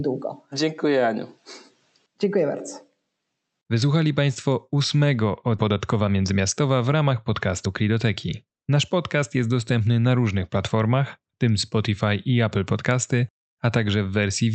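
At 5.57 s the speech skips ahead. About a second of audio was dropped while later audio waited, so the two sides join with no gap. From 5.69 to 9.50 s a jitter buffer speed-up follows. Short pitch-period pieces, totalling roughly 0.3 s, were removed to cut delay, so speech runs at 109% speed and sounds hurried at unchanged pitch, ending just before "dostępny na różnych platformach". Throughout, the call codec's coding noise and an 8 kHz high-frequency cut-off are audible.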